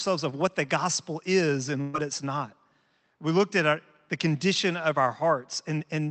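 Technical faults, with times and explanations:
1.81–1.95 s, burst of packet loss: a run of packets after "what the gospel is" was lost or arrived too late to play, so the receiver stretched and faded the last sound for about 120 ms, then jumped ahead to "it's not" with about 120 ms of speech missing.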